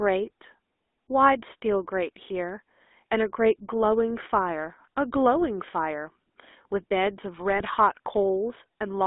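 Throughout, the GSM full-rate codec, consistent with 13 kbps, leaves a buzzy, gravelly roughness; the spectrogram shows a band from 250 Hz to 3.6 kHz with coarse, smeared harmonics. From 7.50 to 7.62 s, GSM bit errors, which fits a bit error rate near 1%, corrupt the decoder's filter and gain values, producing squawks and pops: level spikes on the waveform and garbled spectral blotches.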